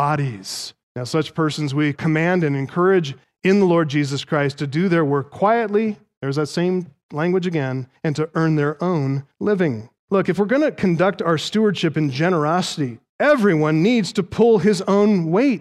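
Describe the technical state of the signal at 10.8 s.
Around 10.8 s the speech signal is intact, with no fault present at that moment.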